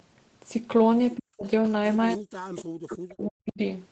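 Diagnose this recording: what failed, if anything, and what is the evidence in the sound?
Speech suppressed in double talk, likely the call's echo canceller ducking both sides. The speech falls about 40 dB at 1.17–1.45 s and 2.14–3.6 s, showing as collapsed waveform and blank spectrogram bands.

Echo leak, likely residual loudspeaker echo escaping that canceller. Faint copies appear at 2.56, 2.88 and 3.22 s, delayed 314–318 ms and roughly 15–25 dB down. They show as pale spectrogram smears echoing earlier patterns.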